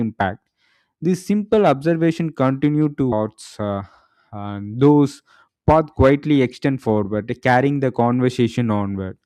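A stream segment skip is heard at 3.11 s, where the speech suddenly jumps forward with a brief blip and the flow of talk no longer joins up. The likely cause is that one chunk of a segmented stream failed to arrive or load, so the player abandoned it and carried on from the start of the following segment, dropping that stretch of the programme entirely rather than pausing or filling the gap.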